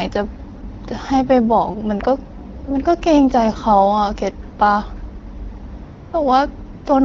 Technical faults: AMR comfort noise

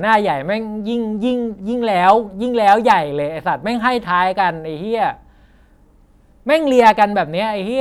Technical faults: hard clipping

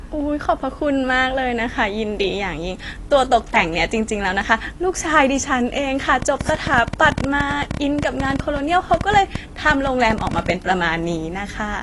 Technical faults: AAC compression; train of clicks

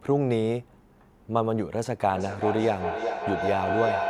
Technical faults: feedback howl

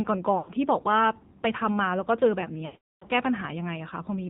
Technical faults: AMR narrowband mobile codec; lost AMR speech frames

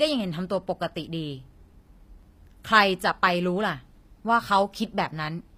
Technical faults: HE-AAC compression

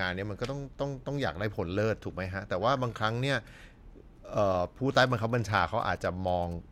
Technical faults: GSM signalling bursts

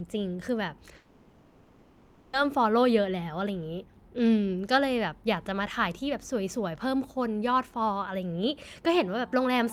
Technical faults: long network dropout

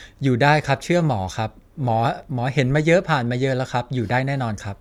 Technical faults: crude rate conversion

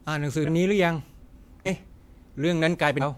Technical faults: compressed frames skipped

